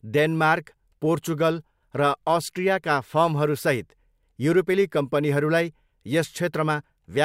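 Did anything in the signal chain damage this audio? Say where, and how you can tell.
Yes: faint clock slip clicks tick roughly every half second from 0.50 to 6.91 s in this speech. The even spacing points to converter clock drift of around 40 ppm, likely dropping or repeating single samples.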